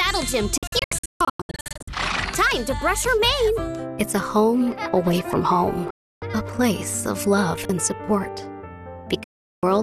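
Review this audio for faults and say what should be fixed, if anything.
Digital broadcast dropouts at 0.58–1.88 s (scattered short holes, longest 144 ms), 5.90–6.22 s and 9.24–9.63 s: the receiver lost valid frames and muted within 3 ms, appearing as sharp-edged, full-band blank columns on a spectrogram and flat gaps in the waveform. Improve reception margin or add stronger error protection so the receiver stops losing frames.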